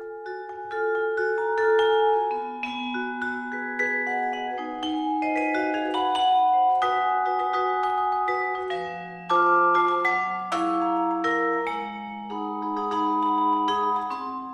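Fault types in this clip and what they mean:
No technical faults can be heard in this clip. There is nothing here to list.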